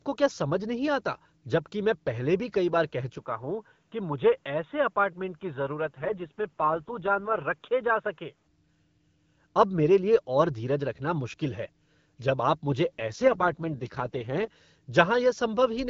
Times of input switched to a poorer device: 3.18-8.47

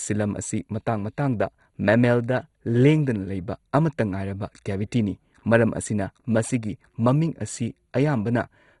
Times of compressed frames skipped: none

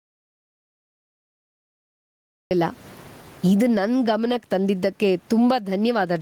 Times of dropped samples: none

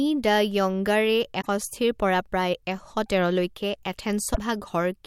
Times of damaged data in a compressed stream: 1.41-1.47, 4.31-4.38

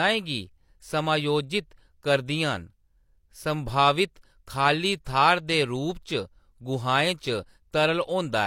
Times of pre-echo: 5.05

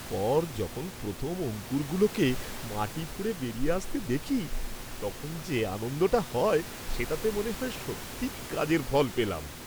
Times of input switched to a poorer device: none

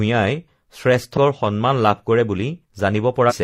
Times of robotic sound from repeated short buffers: none

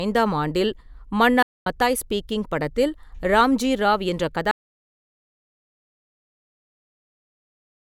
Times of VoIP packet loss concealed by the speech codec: none

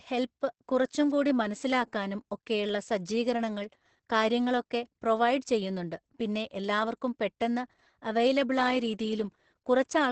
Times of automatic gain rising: none

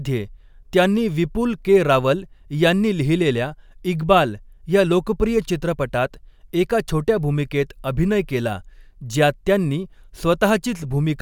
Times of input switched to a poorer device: none

